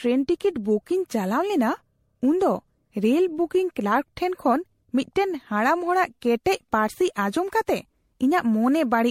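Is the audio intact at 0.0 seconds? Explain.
No. At 0.0 seconds the speech already shows generation loss, and it lasts through the whole clip. The sound is swirly, smeared and hollow, with blurred attacks and nothing above about 16.5 kHz. The likely cause is repeated MP3 encoding, around seven passes, at a level that fits 64 kbit/s. Each new pass quantises on a shifted frame grid. So noise and spectral gaps pile up beyond what one encode would leave.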